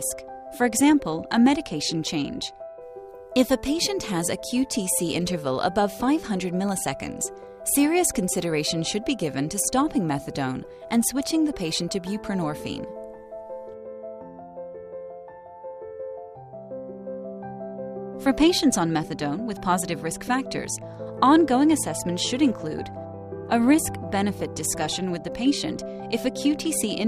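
Nothing stood out as a technical fault on listening.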